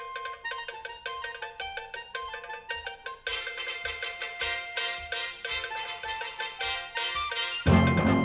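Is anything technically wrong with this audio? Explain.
No, nothing technically wrong can be heard in this audio. There is no fault to point to at any moment in the recording.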